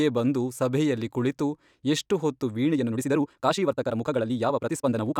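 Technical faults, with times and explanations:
2.69–5.20 s, time-stretched section: after "ಸಭೆಯಲ್ಲಿ ಕುಳಿತು ಎಷ್ಟು ಹೊತ್ತು" the speech abruptly rushes to about 1.74 times its pace while pitch stays put. This is likely software squeezing the audio to fit a length, dropping short pieces to keep the pitch.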